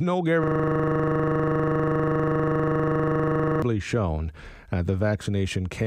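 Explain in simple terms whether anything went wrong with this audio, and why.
From 0.44 s to 3.62 s, the speech stops and becomes a steady buzz. This is a system hang loop. The computer froze, but the sound hardware kept replaying the same 40 ms slice of audio about 80 times, 25 times per second.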